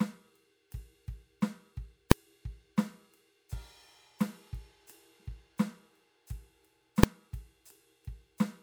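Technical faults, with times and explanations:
2.12 s and 7.03 s, invalid numbers at full scale: each time the music is interrupted by a single sharp bang, about 1.45 ms long, which fits a 64-sample processing block. A calculation in that block went infinite or undefined, and the output was forced to the largest possible value, so the waveform sits flat at one extreme, far beyond the music's peaks. With a block this short, the start and end jumps merge into one bang. A clipped peak would instead follow the music's shape.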